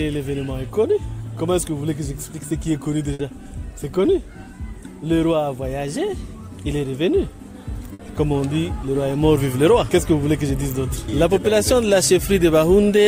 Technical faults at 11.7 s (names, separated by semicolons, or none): none